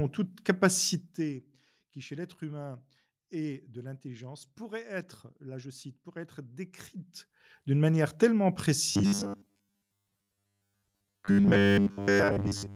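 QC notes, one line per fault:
8.92–12.76 s, robotic sound from repeated short buffers: right after "d'une manière tellement" the speech turns into a rigid metallic buzz at 100 Hz, which fits a 10 ms fragment being looped while most of the real audio is skipped, likely because new buffers arrived too seldom.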